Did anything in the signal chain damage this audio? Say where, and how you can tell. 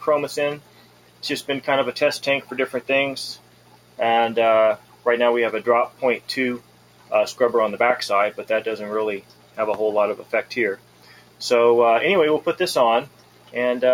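Yes. In call processing, a speech noise suppressor left on this sound misreads sustained content as noise, so level pumps by about 10 dB throughout.

Sound cut by the noise suppressor, about 11 to 12 dB deep: 0.58–1.23, 3.36–3.99, 4.77–5.06, 6.59–7.11, 9.21–9.58, 10.18–10.33, 10.76–11.41 and 13.06–13.55 s. Held portions sink; onsets survive.

Loud pops, about 15 dB above the sound: one at 7.90 s, two between 9.74 and 10.00 s. These are likely from an analogue-wiring voltage step such as a plug or switch.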